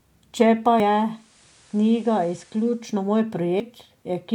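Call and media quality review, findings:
Abrupt jump forward in the speech at 0.8 s, no gap of silence; about a tenth of a second of material missing. Same symptom at 3.6 s. Likely a dropped buffer (overrun) in the capture path: samples not read before the hardware overwrote them, so both sides of the lost span are spliced directly.

Digital radio blending to analogue from 0.97 s to 2.93 s. Cross-fade of 456 ms to the FM simulcast: hiss rises to roughly 30 dB below the speech, level drops about 2 dB. Receiver lost digital lock and fell back to analogue, then blended back to digital at 2.93 s.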